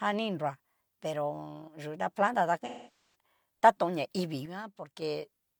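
From 2.65 to 3.15 s, about half a second of the speech turns into a smeared, noisy, phasey wash. This is AAC frame loss with concealment: a run of frames went missing, and the decoder rebuilt the gap from the last good spectrum instead of playing real audio.

From 4.46 to 5.02 s, the level abruptly falls by about 6 dB and then returns just as suddenly. The likely cause is one channel dropping out, so after mixing to mono only half of the shared signal remains for that stretch.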